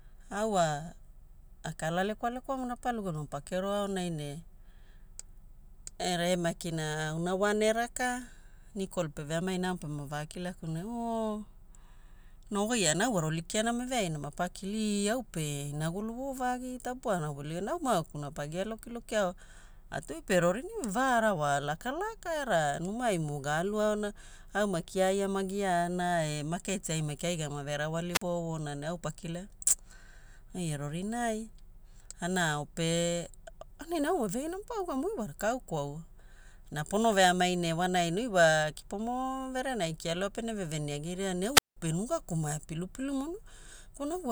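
A speech recording with two wireless microphone squelch dropouts, at 28.11 to 28.22 s and 41.54 to 41.77 s. Each time the FM radio link fades, hiss swells briefly, then the receiver's squelch mutes the output, leaving holes of about 43 ms and 182 ms before the speech returns. That rising static before the silence sets it apart from a digital packet dropout or a noise gate, which cut cleanly without it.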